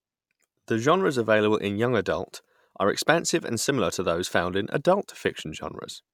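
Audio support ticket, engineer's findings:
No faults found; speech plays normally throughout.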